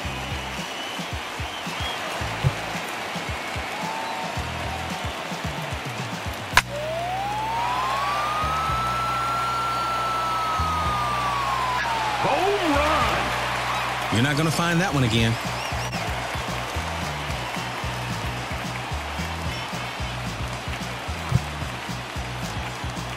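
A short, loud squeaky burst of noise, peaking at around -10 dBFS, cuts in from 11.73 to 11.85 s: a corrupt frame decoded, where a couple of damaged compressed frames were played with misread values. At 15.77 to 15.94 s a jump in the audio marks compressed frames skipped, with roughly 50 ms of audio dropped as the decoder jumps forward.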